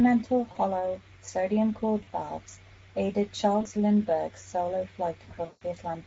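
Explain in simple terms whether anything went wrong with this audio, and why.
The whole clip goes through the Speex codec. This speech codec squeezes the voice hard, so it sounds noisy and hoarse throughout.

There is also VoIP packet loss concealed by the speech codec. Bits of the signal went missing at 0.51, 2.03 and 3.61 s, about 40 ms each time. A longer gap, about 160 ms, comes from 5.45 to 5.63 s. The decoder fills each hole by guessing from the last sound, so you hear a brief buzzy or smeared patch that fades.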